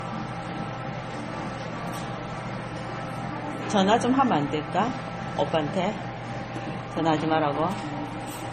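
Transcoding between lossy codecs runs throughout these sounds, from start to finish: nothing is heard above 14.3 kHz, and two layers of smeared, swirly artefacts overlap. The likely cause is a low-rate MP3 re-encoded to a low-rate Vorbis, which fits roughly 32 kbit/s per stage, with the second codec spending its bits on the first one's damage.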